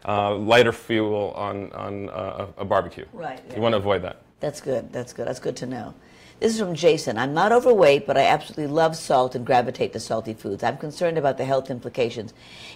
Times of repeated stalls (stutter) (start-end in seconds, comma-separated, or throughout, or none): none